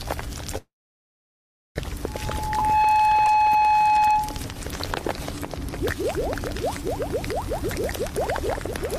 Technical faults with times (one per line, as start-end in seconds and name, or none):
0.57-1.78 call audio freeze
2.07-4.46 loudspeaker feedback squeal